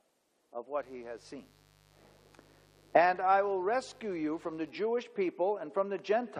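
From 0.76 to 4.7 s, a raspy mains buzz sits well below the sound, its 50 Hz spikes spraying harmonics into kilohertz, unlike a smooth, pure hum.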